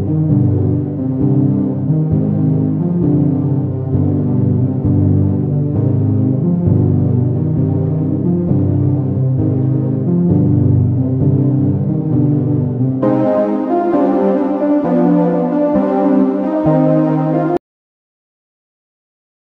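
At 17.57 s the sound cuts off abruptly and never returns: the last 2.03 s, running to the end, are flat digital silence with no room tone or hiss left underneath. This is an audio dropout to silence. The input signal was most likely lost at that moment, perhaps through a disconnected device or a sudden mute, while the recorder kept writing silence, so whatever followed was simply never captured.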